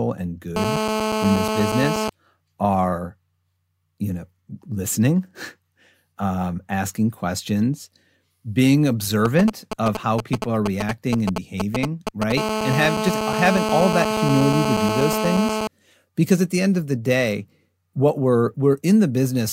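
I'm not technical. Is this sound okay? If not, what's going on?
No. A mobile phone near the recording equipment is leaking into it.

From 0.56 to 2.10 s, and again from 12.37 to 15.67 s, just before "because at the end", there is GSM phone buzz. The phone was on a call, pulsing its radio 217 times a second. The equipment turned those pulses into a harsh, raspy hum.

From 9.25 to 12.32 s you hear GSM signalling bursts. The phone was briefly checking in with the network, causing a galloping dit-dit-dit of short buzzes.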